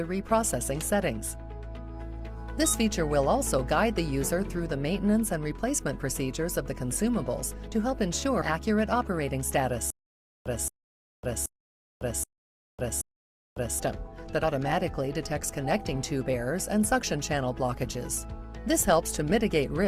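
A skip at 8.41 to 8.43 s marks compressed frames skipped: the audio jumps forward roughly 70 ms, about four frames, consistent with 20 ms codec frames that were missing or rejected as damaged. From 9.90 to 13.79 s a 225 ms burst repeats five times, separated by 552 ms of digital silence on a 777 ms cycle. This stutter with silent gaps is likely a stalled player or stream replaying its last fragment at each retry, and the audio due in that span is lost. Two more jumps follow at 14.43 s, skipping about 40 ms (roughly two frames), and at 19.29 to 19.32 s, skipping about one frame, around 20 ms.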